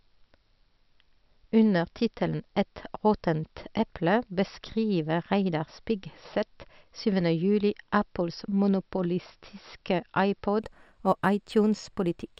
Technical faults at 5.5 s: none

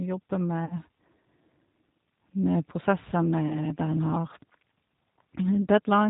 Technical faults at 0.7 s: G.729 codec; VoIP packet loss concealed by the speech codec

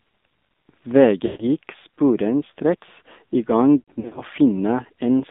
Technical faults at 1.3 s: AMR narrowband mobile codec; lost AMR speech frames

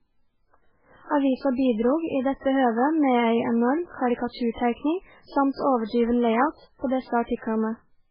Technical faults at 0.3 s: MP3 compression

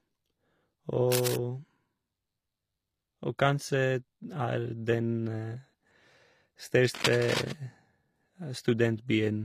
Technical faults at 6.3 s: HE-AAC compression

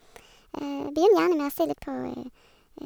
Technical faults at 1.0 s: wrong sample rate

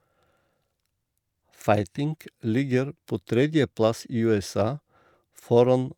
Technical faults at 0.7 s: none

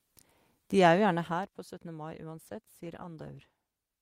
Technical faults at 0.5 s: none

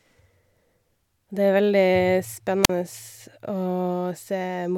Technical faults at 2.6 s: wireless microphone squelch dropout

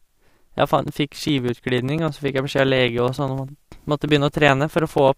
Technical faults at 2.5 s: periodic USB or driver dropouts

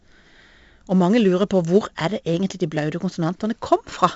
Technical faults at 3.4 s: 4-bit ADPCM compression

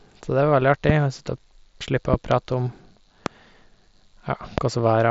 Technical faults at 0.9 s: loud pop

